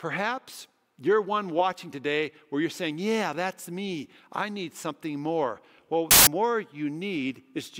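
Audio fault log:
6.11–6.27 s: samples built from the wrong bytes. For about 0.16 s the reader assembles each speech sample from misaligned or swapped bytes, so the rapidly changing low-order bits land in the high positions, and the passage becomes a burst of loud, harsh broadband noise in place of the speech.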